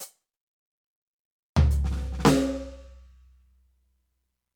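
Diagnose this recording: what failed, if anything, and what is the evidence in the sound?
Nothing in the music points to a failure at any stage of the chain, with the signal staying continuous and intact throughout.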